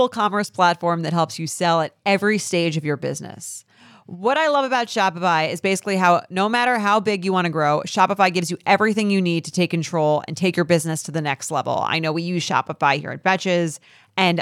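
No technical faults can be heard anywhere in the recording. There are no events to place on the timeline.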